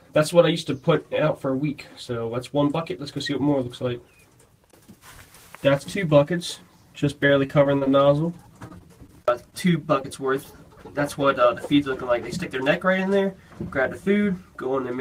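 Choppy, robotic sound with small pieces missing runs from 7.27 to 7.88 s and again from 8.68 to 9.54 s. This is repeated packet loss: five short holes in each stretch, none longer than about 25 ms, each patched by extending the preceding sound. A brief smear at 10.02 to 10.06 s is short concealed packet loss, where about 20 ms went missing and the receiver bridged the hole before blending back into the real audio.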